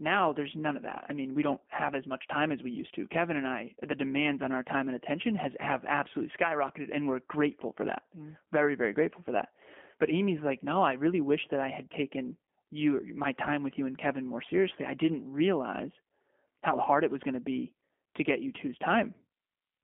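Speech bandlimited to roughly 200 Hz–3.4 kHz throughout, with the slightly rough, synthetic buzz of G.729 coding at 8 kbit/s; pulse-rebuilt excitation, not mere filtering, distinguishes it.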